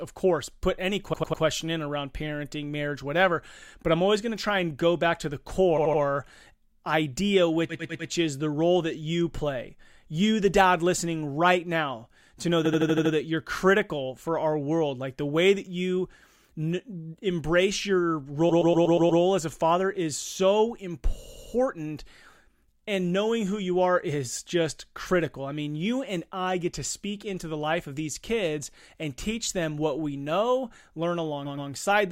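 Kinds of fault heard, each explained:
Repeated frames: the decoder replays short blocks of speech, 80 to 120 ms long, two to six extra times, causing seven stutters that lengthen the audio.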